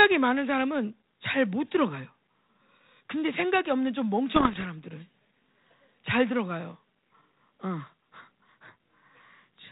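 From 4.32 to 4.67 s the clip has bit errors on an ADPCM link, here a G.726 path whose 32 kbit/s rate and absence of content above 4 kHz point to a DECT-style cordless connection. Roughly one bit in a hundred is flipped. Because each corrupted code also throws off the decoder's adaptive step size and predictor, the damage rings on for a few milliseconds after every error. The result is clustered pops and rough, gritty bursts with brief jumps in level.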